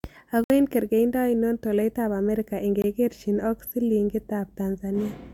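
At 0.44 s the speech drops out for 60 ms, to 0.50 s, just before "eng' kergeindo ainon tolaitap", and again for 20 ms from 2.82 to 2.84 s, right after "kergeindo ainon tolaitap amerika". Each is a block of digital silence, heard as a brief hole. The samples were replaced by zeros with no fade in or out, most likely because the output buffer was not filled in time.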